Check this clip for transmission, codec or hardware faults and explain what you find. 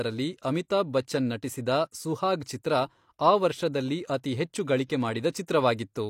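One codec fault is present. At 5.46 s, pre-echo: a transform block spreads quantisation noise ahead of a sharp attack, giving about 19 ms of hiss before it and a smeared onset.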